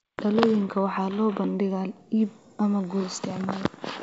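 Speech carried over G.722 wideband telephone coding at 64 kbit/s, where the codec leaves at most a faint trace in the upper band, and no technical fault can be heard in it.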